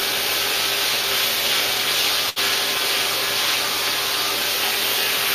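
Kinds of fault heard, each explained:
Burst of packet loss: around 2.29 to 2.39 s a short run of audio never made it to the player in time. The receiver covers the hole by stretching out whatever sound came just before, fading it down over roughly 64 ms so you hear a brief held smear that dies away. Then playback picks up again, but about 60 ms of the original has simply gone, so the sound jumps ahead slightly.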